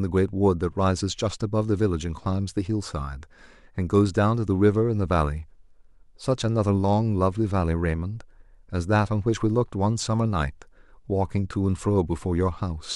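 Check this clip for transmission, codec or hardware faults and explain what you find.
Checking the clip found nothing to explain: it contains no faults.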